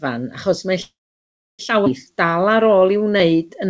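From 0.82 to 1.61 s the sound hangs on a brief fading buzz, then goes silent for about 0.66 s before resuming where it stopped. This is likely a call audio freeze, where delayed packets let the jitter buffer run dry.

At 1.85 to 1.88 s the audio jumps forward abruptly with almost no gap, losing roughly half a second. This is a skip ahead, where a dropped stretch was discarded while later audio was already queued.

From 2.12 s to the end, the audio drags at about 89% speed with stretched sounds but unchanged pitch. This is a jitter buffer slow-down, where repeated pitch periods added 183 ms to rebuild its reserve. The G.722 call path cuts off everything above 8 kHz throughout.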